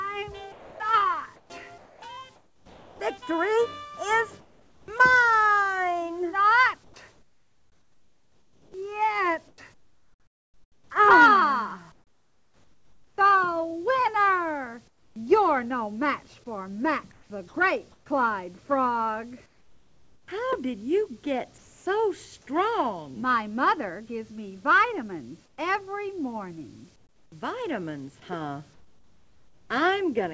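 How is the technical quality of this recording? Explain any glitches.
The technical quality is compromised by two gating faults on top of a call-codec path that cuts everything above 8 kHz, which fits G.722.

From 0.52 to 21.86 s the sound is choppy: quiet edges and soft passages drop out, about 7.7 s in total. This is likely sound chopped by the voice detector, toggling transmission and filling gaps with comfort noise.

From 25.46 to 29.70 s, about 1.4 s of the real background gives way to a flat, featureless hiss. The sender likely paused transmission during silence, and the receiver substituted comfort noise in place of the background, losing its natural detail.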